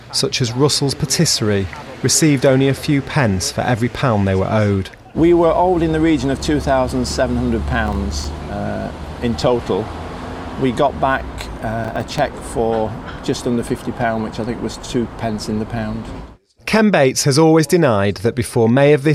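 At 7.87 s a burst of processor overload crackle starts and runs to 8.25 s. A second burst follows from 11.84 s to 12.18 s, and it sounds denser. The processor misses its buffer deadlines over and over. Each miss drops in a tiny hard-edged gap of silence. The gaps are very short, which fits buffers of about 3 ms. Together they make a gritty tearing over the sound. The tearing stops as soon as the load passes.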